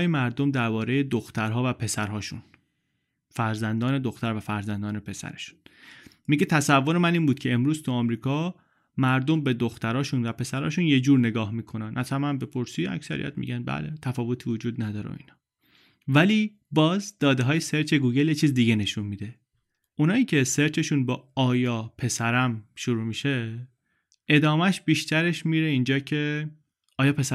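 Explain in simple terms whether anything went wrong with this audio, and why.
Nothing went wrong with this audio, as no faults can be heard anywhere in the recording.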